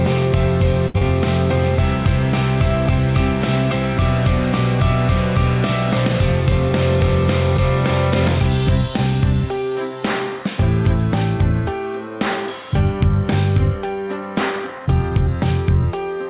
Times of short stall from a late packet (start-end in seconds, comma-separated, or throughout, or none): 0.88-0.96